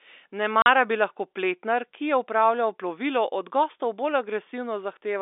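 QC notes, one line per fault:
0.62–0.66 s, packet loss filled with silence: a 40 ms hole cuts the speech just before "bi lahko pletnar ki". The gap length points to two consecutive 20 ms packets going missing. The receiver had nothing to play, so it inserted digital silence. The sound stops and restarts abruptly, with hard edges at each end. The speech is carried on the narrow telephone band of the G.711 line.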